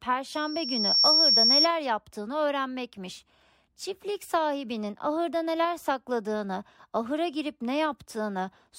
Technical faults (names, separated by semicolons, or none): loudspeaker feedback squeal